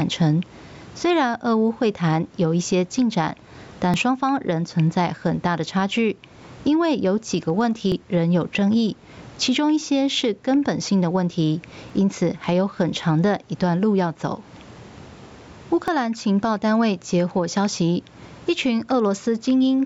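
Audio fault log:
Throughout: gain pumping. The gain swings by about 15 dB as the speech gets loud and quiet, so loud and quiet parts sit squashed together. That's likely the input gain set way too hot with a fast limiter clamping down on each peak.
3.94, 7.92, 11.90 and 15.88 s: audio missing between chunks. There's a tiny skip, around 20 ms, roughly every 4 seconds, with the two sides butted straight together. That regular spacing likely points to a recorder working in 4-second chunks and dropping a sliver at each handover.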